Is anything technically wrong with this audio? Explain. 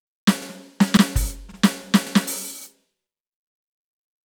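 Yes, the music shows overlapping chunks. The audio was processed in blocks of about 0.5 s, and each block began about 48 ms before the previous one finished, so that stretch of sound plays twice at every join. The repeats occur at 0.42, 0.97, 1.52, 2.07 and 2.61 s, roughly every 0.55 s, and each is heard as a brief stutter or click that recurs at a steady, mechanical rhythm.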